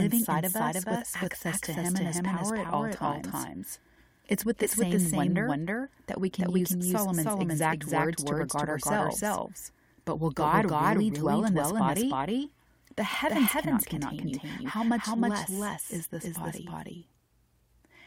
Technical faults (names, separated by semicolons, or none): doubled audio track